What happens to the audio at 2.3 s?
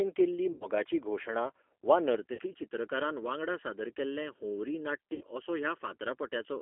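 Packets were lost on the VoIP link just after "घोशणा वा", from 2.33 to 2.41 s. That is about 60 ms missing, which points to two packets. With nothing to decode, the G.729 decoder repeats its last pitch and filter at falling gain. The speech smears into a fading buzzy tone or coloured noise and stays weak briefly after packets resume.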